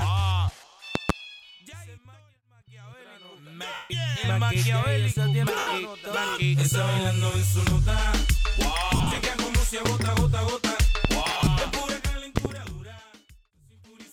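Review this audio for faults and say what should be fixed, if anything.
Loud pops occur at 0.95 s and 12.37 s as quick doubles, and singly at 9.85 s and 11.05 s, peaking roughly 20 dB above the sound (nearer 15 dB at 9.85 s). Each is a sharp electrical pulse, likely from a connector, switch or static discharge, added on top while the sound continues underneath. That continuity is what separates them from dropouts. Secure connections and add grounding to stop these transients.

Lost LE Audio frames disrupt the sound at 3.74 s for 160 ms, at 5.59 s for 80 ms, and in scattered short gaps over about 240 ms from 8.94 s and about 220 ms from 11.25 s. The LC3 decoder fills each gap by repeating the last spectrum with random phase, so tonal content smears into noise and longer gaps fade toward silence. Unlike the pops, the sound itself is replaced rather than overlaid. Improve link margin or add retransmission headroom to keep frames from dropping.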